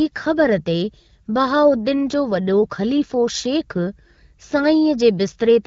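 No technical faults can be heard in this speech.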